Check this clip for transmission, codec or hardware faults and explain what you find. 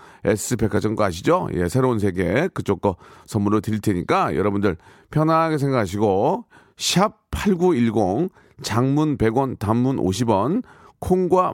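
One fault is present: a block of digital silence at 0.77 s in the speech. For about 1.45 ms the signal drops to silence and then resumes, most likely because the output buffer was not filled in time; the length fits a 64-sample buffer. The cut has no fade in or out, so the two hard edges merge into a single sharp tick. A lost network packet would leave a longer hole, usually smoothed by concealment.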